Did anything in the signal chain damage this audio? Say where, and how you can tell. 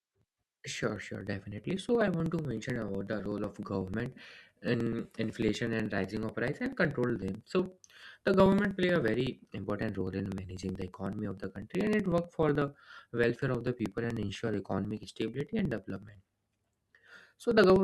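Yes: periodic USB or driver dropouts, 0.09–17.76 s. Every 0.062 s the driver stalls and about 2 ms is skipped, causing steady ticks and evenly spaced spectrogram lines.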